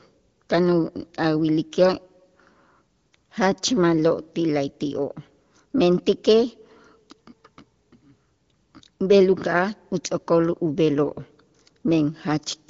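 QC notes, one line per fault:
Nothing stood out on listening to this speech, which has the narrower top end of a wideband phone call with nothing heard above about 7.4 kHz.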